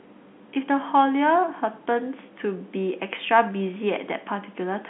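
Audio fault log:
No faults detected.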